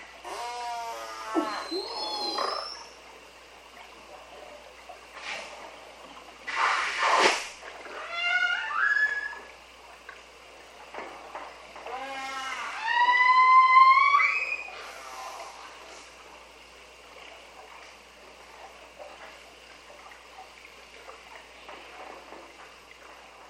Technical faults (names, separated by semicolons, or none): overlapping chunks